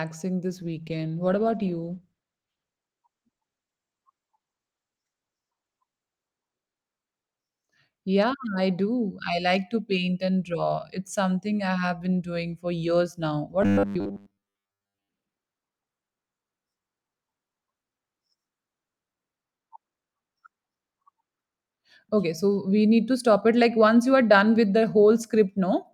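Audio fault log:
0.47–9.77 s, call bitrate drop: the speech loses its upper range and turns rough and watery as the encoder's budget falls from 64 kbps to 15 kbps, staying at its lowest for about 5.2 s before clarity returns. With far fewer bits, Opus quantises coarsely and trims the high band. Unlike a dull microphone or a low-pass filter, the dullness comes with grainy, smeared detail and lifts once bandwidth recovers, with no gaps or clicks as packet loss would leave.
13.62–15.08 s, robotic sound from repeated short buffers: the speech collapses into a rigid metallic buzz at 100 Hz that still loosely tracks the syllables. The likely cause is audio arriving too seldom, so playback loops the last chunk, and a 100 Hz pitch fits a repeated 10 ms segment covering most of the span. This differs from the earlier bitrate drop: the tone is a fixed mechanical pitch, not muffled coarseness.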